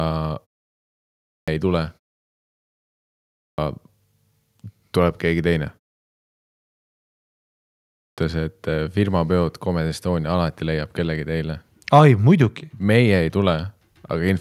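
Clipped starts after a pause occur at 0.84 to 1.48 s, 2.96 to 3.58 s, 6.22 to 6.83 s and 7.56 to 8.18 s. After each pause of about half a second to one second, the output device has gone idle and needs roughly 0.6 s to wake. That opening stretch of speech is swallowed, so each phrase bursts in abruptly, already under way, while the ordinary quiet of the pauses themselves passes without loss.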